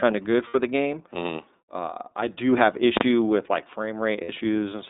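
Throughout, the speech sounds thin, slightly rough and synthetic, confined to a telephone band of roughly 250 Hz to 3.7 kHz. This is the iLBC codec, which codes each frame's excitation independently. The damage is plainly audible and fits its 13.33 kbps, 30 ms-frame mode.

From 0.47 to 0.55 s, and again from 4.23 to 4.30 s, the sound briefly turns into a held, faintly buzzy vowel before snapping back to normal. These are lost iLBC frames. About 60 ms went missing each time, consistent with two 30 ms frames. The decoder filled each gap by repeating the last pitch cycle mixed with noise.

At 2.97 to 3.01 s, a very loud bang cuts through. Here invalid numbers at full scale are heard. A calculation produced infinite or invalid values, and these were clamped to the maximum level, pinning the output flat at one extreme value, far beyond the audio's peaks, for a block of about 40 ms.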